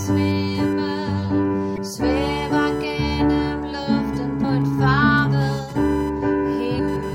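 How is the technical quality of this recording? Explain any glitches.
The recording has two technical faults: an ongoing interference whine and three short decoding glitches.

Computer activity noise runs throughout. Processor or peripheral load disturbs the audio circuit's shared ground, producing a buzzy whine around 1 kHz, roughly 25 dB below the signal.

Damaged data in a compressed stream occurs at 1.74–1.78 s, 4.40–4.45 s and 6.75–6.80 s. Corrupted frames make the decoder misread data and resynchronise, heard as brief chirps or squawks.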